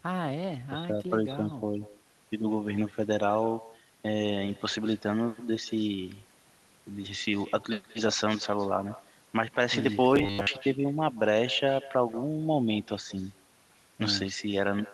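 From start to finish, every phrase is trailed by a fainter, thinner copy arriving about a fifth of a second later, some 19 dB below the speech. This is echo with no canceller: the far end's loudspeaker feeds its microphone, and nothing strips that return before it travels back.

From 10.16 to 10.47 s the speech collapses into a rigid metallic buzz at 100 Hz that still loosely tracks the syllables. This is robotic sound from repeated short buffers, likely caused by audio arriving too slowly, so a 10 ms chunk was looped while most of the real signal was skipped.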